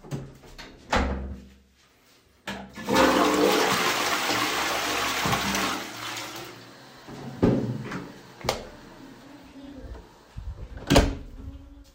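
An everyday sound recording where, at 3.74 s, compressed frames were skipped: a couple of 26.1 ms frames never reached playback, so roughly 50 ms vanishes in a brief smeared blip rather than a click.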